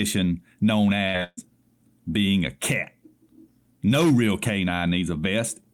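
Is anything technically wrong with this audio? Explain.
Yes. There are two bursts of packet loss close together in this speech, from 1.07 to 1.16 s and from 1.24 to 1.39 s. Each time, a run of packets never arrived, so the receiver stretched the last sound and faded it, covering about 63 ms and then about 134 ms, with the final 30 ms of the second gap silent. The speech then resumes with roughly 60 ms and 140 ms missing. On a spectrogram, the last sound smears flat and fades, and in the second gap it drops to blank.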